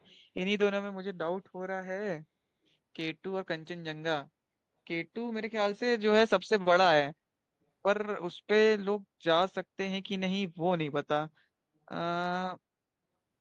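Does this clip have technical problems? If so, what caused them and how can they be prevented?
Yes. An echo leak occurs from 0.01 to 0.14 s: a very faint copy of the speech returns 336 ms late, likely because a loudspeaker's output reached its microphone and the echo canceller failed to remove it. Headphones or better-tuned echo cancellation would prevent it.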